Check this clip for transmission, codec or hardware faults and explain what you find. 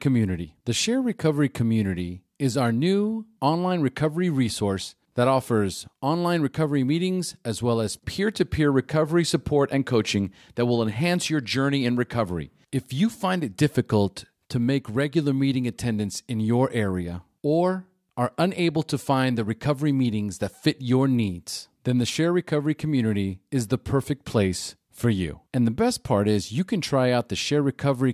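Listening through, I hear no faults anywhere in the recording.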